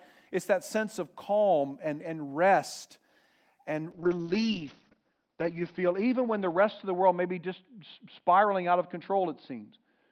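A call bitrate drop from 3.93 s to the end starves the encoder, fitting a fall from 32 to 7 kbps; speech turns rough and muffled, cut off near 6 kHz.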